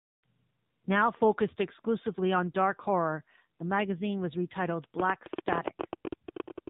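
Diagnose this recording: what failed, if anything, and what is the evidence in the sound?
The speech went through the AMR narrowband mobile codec, so it's a codec-stage problem. Nothing above 4 kHz survives, and the whole clip has that plainly audible buzzy, synthetic edge, which fits AMR-NB running at a low rate of about 7.4 kbps.

From 5.00 s to 6.68 s there's a train of clicks: roughly twenty pops at an uneven spacing, averaging about 13.7 per second and peaking about 20 dB above the signal. Same-shaped pulses like that are likely interference or a struggling interface on the analogue or converter side.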